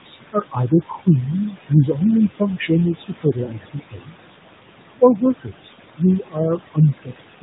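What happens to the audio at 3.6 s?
Around 3.6 s the speech sounds faint and swallowed, with soft consonants and word endings sinking toward the background. This is speech cut by the noise suppressor, which runs from 2.34 to 4.36 s. It mistakes parts of the speech for noise and turns them down with the background, by about 21 dB at the deepest, for about a second in total.

Just before that, from 3.44 to 3.51 s, there is a brief drawn-out warble and dip lasting 40 ms. These are lost AMR speech frames, and the gap fits two 20 ms frames that failed. The decoder filled the gap by repeating the last good pitch and vocal-tract settings at falling gain, and the speech returns weak or rough for a moment.

Underneath all of this, the background sinks between phrases and swells under them. These are noise suppressor artifacts: frame by frame, bands taken for steady noise are pulled down by about 21 dB.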